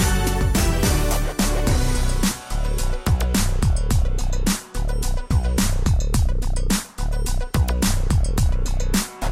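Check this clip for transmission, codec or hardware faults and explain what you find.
There are two brief skips. Audio missing between chunks at 5.31 s and 8.30 s, 3 s apart: likely the processor dropping a few milliseconds at each chunk boundary, butting the edges together into a tiny jump.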